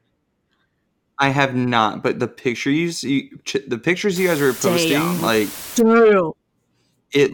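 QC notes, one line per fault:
4.16–5.80 s, low bit depth with dither: right after "pictures you the pictures" the speech drops to about 5 bits, with dither applied before rounding. The quantisation error becomes an even, constant hiss roughly 15 dB below the speech rather than harsh distortion.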